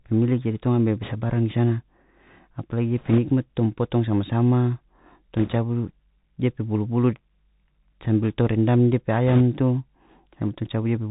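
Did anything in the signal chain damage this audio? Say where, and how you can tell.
Yes. At the codec stage, the speech went through the Bluetooth CVSD headset codec, a one-bit delta coder whose adaptive step can't keep up with loud high content. Throughout, nothing above 4 kHz survives, s sounds turn scratchy, and a granular hiss sits underneath, which fits a 64 kbps CVSD link.

On the radio link, there are bit errors on a Bluetooth voice link at 1.02–1.14 s, 2.99–3.19 s, 5.37–5.56 s and 9.27–9.41 s, with error rates of a few percent. Each flipped bit nudges the delta decoder only slightly and then fades, so these bursts bring rushing crackle rather than sharp clicks.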